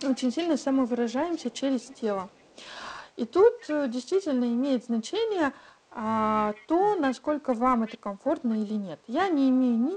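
From the start, periodic clock jitter, interference wobbling the converter clock at around 1 kHz, puts sidebands on the speech, giving it a rough, metallic edge. Echo leak is the likely cause of a faint delayed copy arriving 233 ms behind the speech, well below it in level, from 0 to 2.56 s, at 3.6 to 3.71 s, 6.4 to 6.67 s and 7.5 to 7.98 s. The copy comes through when the far side's echo canceller lets its loudspeaker sound back into its microphone. The call's microphone processing leaves nothing above 8 kHz.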